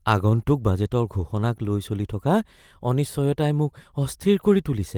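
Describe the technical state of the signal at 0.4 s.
Right around there you're inside a lost packet rebuilt from error correction, running from about 0.35 to 0.41 s. The original packets never arrived, but the ones that followed carried low-bitrate backup copies, and the decoder played those instead. So there's no dropout, just roughly 40 ms of rougher, noisier speech, which fits two 20 ms packets. It's a brief grainy patch where the sound should be clean.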